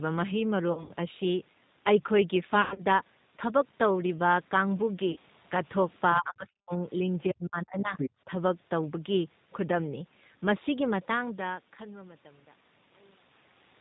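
Speech carried throughout by the G.729 codec at 8 kbit/s has plainly audible rough, synthetic texture, and a spectrogram shows nothing above 4 kHz. VoIP packet loss concealed by the speech codec occurs at 0.73–0.91 s, 2.62–2.85 s and 5.12–5.19 s, where the decoder stretches the last sound into a buzzy tone or coloured noise that fades: a sagging waveform envelope. Speech suppressed in double talk, likely from an echo canceller ducking the talker while the far end spoke, cuts the voice by roughly 40 dB at 6.15–6.85 s and 7.31–7.95 s, with a shallower dip of about 10 dB at 8.25–8.30 s, seen as near-empty gaps in the waveform. The other side's voice leaking through appears at 7.97–8.10 s as a second voice only a few dB below the talker, likely residual loudspeaker echo, with its own unrelated harmonic stripes on the spectrogram.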